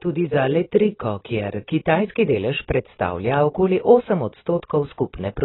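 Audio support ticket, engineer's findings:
Dull, band-limited speech throughout; sibilants smeared with a fizzy, warbling texture. Spectrogram: hard ceiling at 4 kHz, nothing above, blotchy energy beneath. Likely AAC compression (AAC-LC): heavy quantisation damage fits a starved bitrate near 16 kbps, high band discarded.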